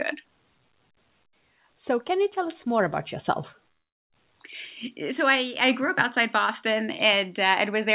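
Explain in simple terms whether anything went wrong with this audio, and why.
Two things went wrong, both around the middle of the speech. From 3.52 to 3.56 s there is a short concealed packet loss: a tiny piece never arrived and was patched over, leaving only a brief smear. From 3.72 to 4.12 s the speech briefly buzzes or hisses, then goes almost silent for about a third of a second before resuming further on, which points to a likely long network dropout. The difference is length: the first gap was short enough to patch, while in the second the patching faded out and that stretch of speech is simply lost.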